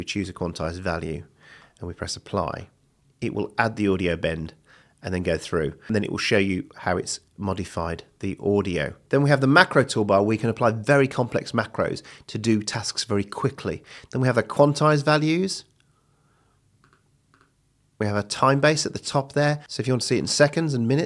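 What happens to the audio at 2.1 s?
Nothing goes wrong at 2.1 s; the audio there plays through intact, with no dropout, click, distortion or other fault.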